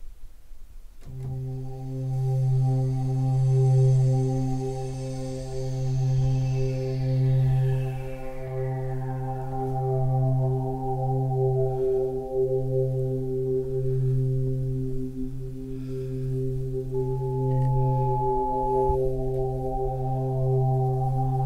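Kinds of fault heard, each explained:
Loudspeaker feedback squeal: loop gain above unity at 853 Hz lets that tone build on itself, swelling over about one and a half seconds to roughly the signal's level.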